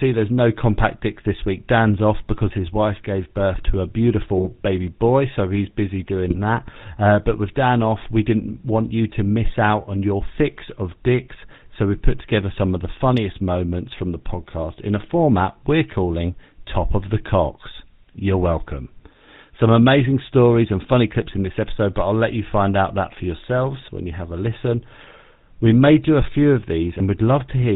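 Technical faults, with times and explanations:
Throughout, GSM full-rate codec: the voice is buzzy and gravelly, with nothing above 4 kHz. A vocal-tract model is driven by coarse, regularly spaced pulses, which fits a 13 kbps GSM encoder. Unlike plain band-limiting, the roughness sits inside the voice itself.
4.37–4.47 s and 6.26–6.39 s, GSM bit errors: brief squawks and gargling, the first just after "gave birth to a" and the second just after "boy so he's busy". Corrupted filter, pitch or gain values make the decoder bend the spectrum or jump in level for a few frames. Unlike dropouts, sound keeps coming, but it is garbled.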